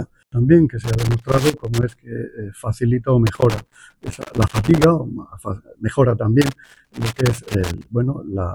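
Three bursts of loose connector crackle occur, from 0.84 to 1.95 s, 3.27 to 4.84 s and 6.41 to 7.86 s. A worn or dirty contact is rapidly making and breaking, chopping the signal into irregular scratchy fragments with pops where the line jumps. Unlike evenly spaced digital clicks or steady vinyl surface noise, the crackle comes in uneven clusters lasting over a second, matching physical movement of the plug.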